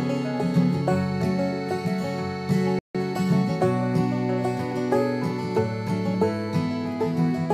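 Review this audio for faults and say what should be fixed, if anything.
The player likely ran short of data or had its audio thread blocked at 2.79 s, leaving the output silent for about 155 ms. This playback stall cuts the music off mid-flow until 2.95 s, when it resumes. Deeper output buffering and a non-blocking, high-priority audio thread would prevent it.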